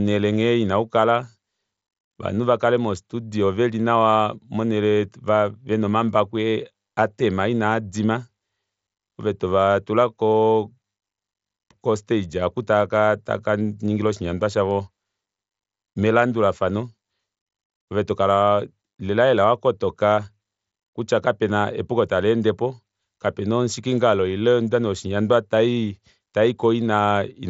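No technical faults are audible.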